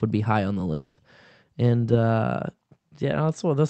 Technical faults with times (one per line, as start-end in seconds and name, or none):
0.73-1.00 long network dropout